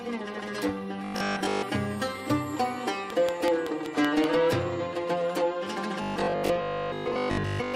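From 1.05 to 1.65 s, and again from 6.02 to 7.74 s, the sound turns into a rigid metallic buzz at 50 Hz: robotic sound from repeated short buffers, likely from 20 ms chunks replayed while most real audio is skipped. A spectrogram shows evenly spaced 50 Hz harmonic stripes. From 3.10 to 4.25 s comes a regular train of clicks, about seven at 5.27 per second, likely interference, standing roughly 20 dB above the sound as thin vertical spikes.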